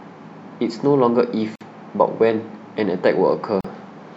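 Speech with gaps at joins of encoded pieces: short silences at 1.56–1.61 s and 3.61–3.64 s, two seconds apart, where untrimmed encoder padding stayed in.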